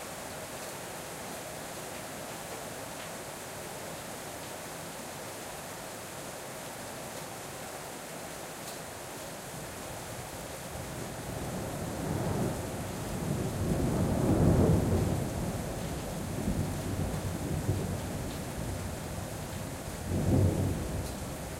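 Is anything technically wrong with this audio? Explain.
Yes. A loud pop at 10.53 to 10.55 s, likely from a voltage spike such as a switch or static, peaks about 5 dB above the sound, showing as a waveform spike and broadband vertical spectrogram stripe.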